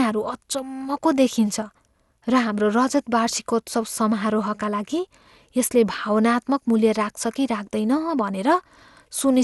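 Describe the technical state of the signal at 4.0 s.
At 4.0 s the speech sounds swirly, hollow and smeared, with blurred attacks and nothing above about 11.9 kHz, as it does throughout. This is generation loss, likely from about seven successive MP2 encodes near 96 kbit/s, each requantising on a shifted frame grid.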